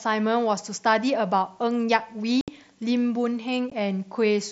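Speech with unconcealed Bluetooth headset packet loss: the sound drops to hard-edged silence from 2.41 to 2.48 s (about 68 ms) and briefly at 3.70 s. Nothing is filled in, unlike concealed loss, which smears or repeats audio across the gap. The mSBC wideband link stops at 8 kHz.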